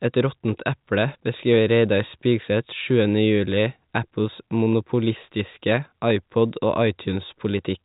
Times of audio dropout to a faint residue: none

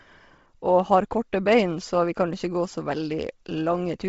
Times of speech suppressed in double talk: none

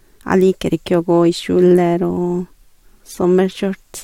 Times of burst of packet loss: none

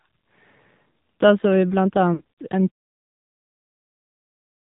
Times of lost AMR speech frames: 2.14-2.38

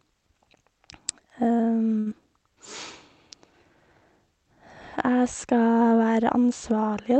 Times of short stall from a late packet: 1.99-2.09

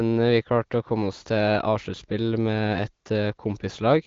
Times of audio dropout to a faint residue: none

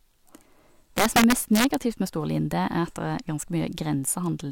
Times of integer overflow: 0.98-1.74

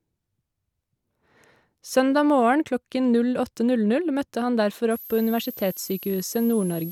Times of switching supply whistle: 4.91-6.91

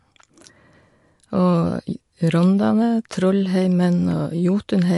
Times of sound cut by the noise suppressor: none

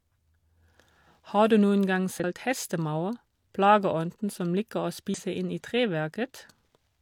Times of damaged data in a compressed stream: 2.20-2.24, 5.14-5.19

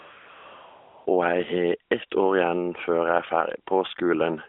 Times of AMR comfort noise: 0.00-1.06

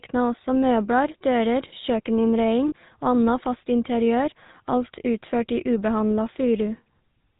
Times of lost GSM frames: 2.68-2.72

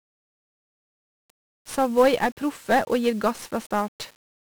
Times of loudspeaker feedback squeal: none

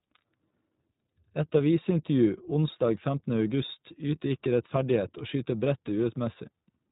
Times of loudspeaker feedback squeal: none

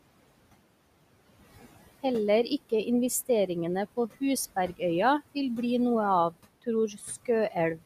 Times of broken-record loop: none

